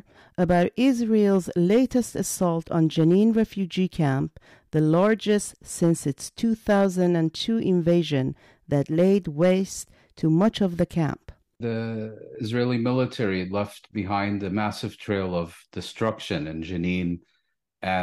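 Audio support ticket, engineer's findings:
Hard clipping throughout speech, full length. Crackle on louder speech peaks. Stage driven about 4 dB past its ceiling; peaks cut flat, under 1% of samples affected. Flat tops add high harmonics. Probable component: converter or fixed-point gain stage.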